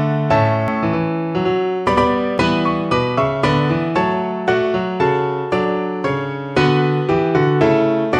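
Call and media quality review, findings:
Doubled audio track, 0.68–2.38 s: sound suddenly acquires a hard, slap-like second copy trailing the original by roughly a tenth of a second, at about the same loudness, full-band, no decay or room tone; starts and stops abruptly. Likely cause: same signal mixed in twice, a second capture via a slower path or an edit leaving two out-of-step copies overlapping. Check capture routing and the edit timeline around 0.7 s.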